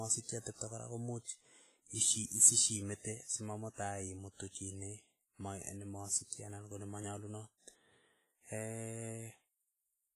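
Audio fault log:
throughout: WMA compression, likely: ringing, washy, with hiss breathing alongside the sound and nothing above 15.3 kHz, heavy coarse quantisation fitting roughly 24 kbps.
2.26–2.31 s: pre-echo, a 58 ms hiss smearing ahead of a sharp attack, as block-wide quantisation noise fills the quiet moment before it.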